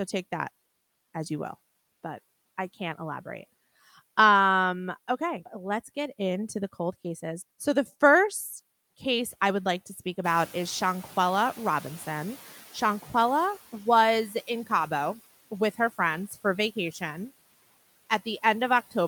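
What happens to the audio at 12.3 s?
The noise suppressor is catching up at 12.3 s, partway through a span from 10.24 to 13.55 s that begins just after "would like to speak". The room noise jumps by about 13 dB at around 10 s, and the suppressor's noise estimate trails that rise. The louder noise first comes through with less reduction, then sinks by about 10 dB as the estimate adapts over roughly 3.3 s.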